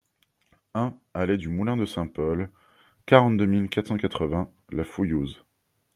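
Automatic gain rising affects this speech recording from 0.73 to 2.59 s. The gain control judged the input too quiet and raised its gain by about 6 dB over nearly two seconds, so the voice and background swell up together as one.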